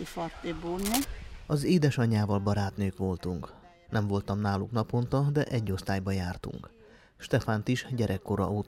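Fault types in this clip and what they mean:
Cable scratch noise, 0.79 to 1.05 s: for about a quarter of a second a dense, uneven burst of scratching and rustling sits over the sound, only about 5 dB below it, so it is plainly audible rather than buried. The likely cause is a worn cable, connector or control being moved, so that its contact resistance jumps about rapidly and injects ragged bursts of noise into the signal path until the contact settles again.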